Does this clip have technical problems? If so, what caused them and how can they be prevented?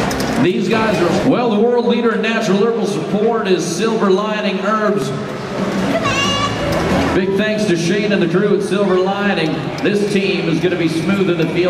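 Yes. At 5.02 s there is a block of digital silence lasting 0.73 ms, which fits a 32-sample buffer that was left as zeros. The abrupt cut to zero and back makes a brief tick. On a waveform it appears as a flat gap at zero with sharp edges, and on a spectrogram as a thin broadband vertical line. Preventing it means making sure every audio buffer is filled in time and that no invalid values reach the output.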